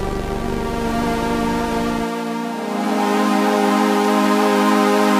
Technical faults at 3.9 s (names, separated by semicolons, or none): clock drift buffer slips